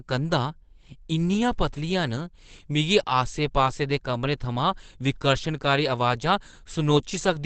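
Throughout the speech, nothing is heard above 8.7 kHz, and the sound is muffled and hoarse without the watery swirl of MP3 damage. This is likely Opus compression running in its speech (SILK) mode, which fits a low bitrate near 16 kbps.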